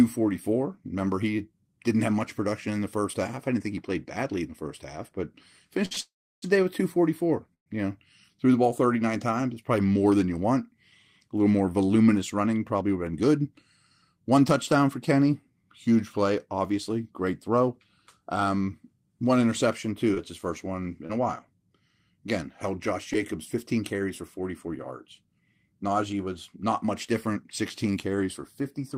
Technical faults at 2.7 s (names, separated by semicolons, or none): none